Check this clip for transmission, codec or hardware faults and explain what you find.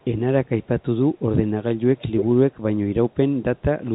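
One fault shows up, an echo leak, heard over the narrow telephone band of the G.711 coding. At 0.01–0.05, 0.46–0.84, 2.17–2.25, 2.52–2.57, 3.1–3.15 and 3.57–3.62 s, a copy of the speech returns 295 ms late. It is very faint, around 40 dB down, except at 2.17 s, where it comes back nearly as loud as the speech. The likely cause is a far-end loudspeaker whose echo canceller let part of the signal through. Room reverberation would smear the sound, but this is a distinct, fixed-delay repeat.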